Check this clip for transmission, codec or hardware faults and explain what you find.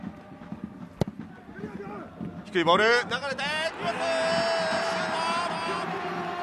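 One fault is present: a doubled audio track from 4.71 s to the end. A second full-band copy appears abruptly, trailing by roughly 0.4 s at about 5 dB below the original, with no decay or room colour. The likely cause is a slower second capture path.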